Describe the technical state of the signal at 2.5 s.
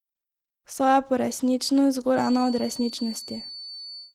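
At 2.5 s the speech carries Opus voice compression damage that runs through the whole clip. The coarse, hoarse, slightly robotic texture fits hybrid-mode coding at a low rate, around 16 kbps.

A feedback whistle is also present, running from 2.11 s to the end. It's a thin, steady 4.5 kHz tone sitting well under the speech and slowly swelling and fading in level, likely from a loudspeaker-to-microphone loop hovering just short of runaway.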